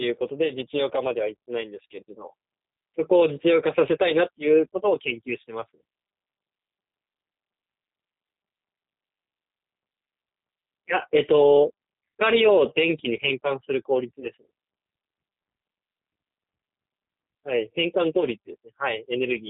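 From the first moment the whole clip carries the G.729 codec sound, and it's plainly audible. The speech is rebuilt from a vocal tract filter, a pitch predictor and a handful of pulses per frame, so nothing above 4 kHz comes through. It sounds narrow, a bit rough and synthetic, which fits a low-rate coder around 8 kbit/s, likely the G.729A variant.

At 14.20 to 14.27 s there's VoIP packet loss concealed by the speech codec. Roughly 20 ms of audio went missing, consistent with a single lost packet. The decoder kept extrapolating from its last pitch and filter state while lowering the gain, so you hear a short stretched sound, a buzzy tone or coloured noise, that fades out. Since each frame builds on the previous one, the speech stays weak or distorted for tens of milliseconds or more after the gap.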